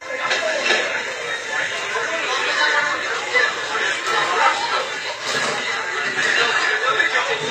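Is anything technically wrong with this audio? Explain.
Yes. Throughout the clip, the treble sounds gritty and metallic, with nothing above 14.9 kHz, likely from HE-AAC compression at a low bitrate around 24 kbps. Upper bands are copied from lower ones, so harmonics misalign; a spectrogram shows blocky, repeated high-frequency texture ending abruptly at that ceiling.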